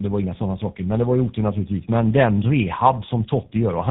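Speech running through two low-rate speech codecs in a row, a case of tandem speech coding, sounds rough, muffled and warbly throughout. Recoding the first coder's degraded output compounds the artefacts, likely an AMR-type stage followed by GSM full rate. A spectrogram shows nothing above about 3.8 kHz and smeared harmonics.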